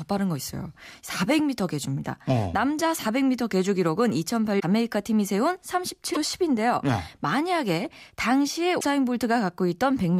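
At 4.59–4.63, 6.13–6.17 and 8.79–8.84 s the speech skips ahead with a brief glitch, likely a broken MP3 bit reservoir: frames lost, successors decoding from wrong bytes.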